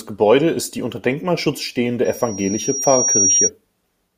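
From 2.04 to 3.50 s the microphone is picking up the loudspeaker it feeds, and at 5.7 kHz the loop gain rises above one, producing loudspeaker feedback squeal. That single frequency keeps feeding itself, so a thin, piercing whistle emerges over the speech, swells over roughly a second, and ends up a little louder than the speech itself before it stops at 3.50 s.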